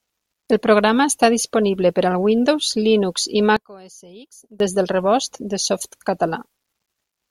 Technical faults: one channel inverted

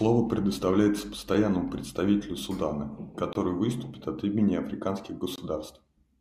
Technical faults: gap between stream segments

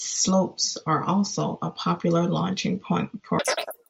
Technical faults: wrong sample rate

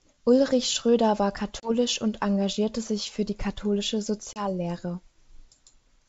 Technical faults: packet loss on an ADPCM call

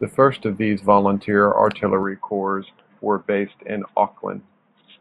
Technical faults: input switched to a poorer device

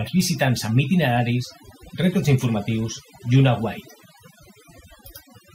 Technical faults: overdone noise removal

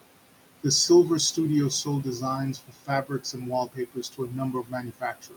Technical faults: noise suppressor artifacts; speech cut by the noise suppressor

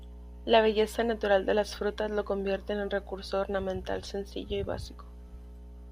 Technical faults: mains hum

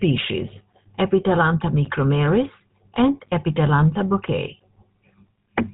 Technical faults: GSM full-rate codec

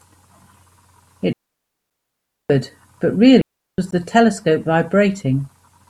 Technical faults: digital wireless dropout; gap at a join of encoded pieces

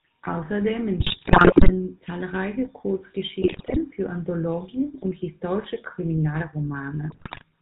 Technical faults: GSM full-rate codec; GSM bit errors

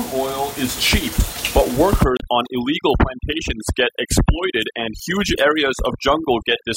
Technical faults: overdone noise removal; damaged data in a compressed stream

